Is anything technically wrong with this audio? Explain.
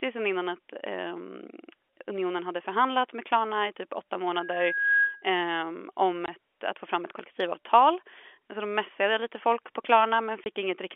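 Yes, two kinds of fault are audible in this telephone-band speech. Loudspeaker feedback squeal, 4.34 to 5.26 s: the microphone is picking up the loudspeaker it feeds, and at 1.6 kHz the loop gain tops one. That tone swells over roughly half a second into a steady squeal somewhat louder than the speech, then stops.

Packet loss filled with silence, 6.26 to 6.28 s and 10.44 to 10.46 s: each time a chunk of audio went missing and the receiver played nothing in its place. Each gap is 20 ms, which fits a single lost 20 ms packet, and it has hard edges.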